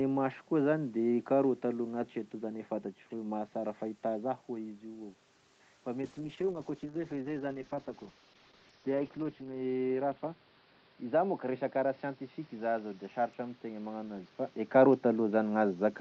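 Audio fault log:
6.02–16.00 s, call bitrate drop: from 6.02 s the sound turns coarser and duller, with a watery, smeared texture. The upper band narrows from 8 kHz to 6 kHz. This fits the call's bandwidth estimate falling and the Opus encoder being pushed from around 32 kbps down toward 8 kbps. At that rate Opus quantises more crudely and sheds high frequencies. The roughest stretch lasts about 3.5 s, and full quality does not return before the clip ends.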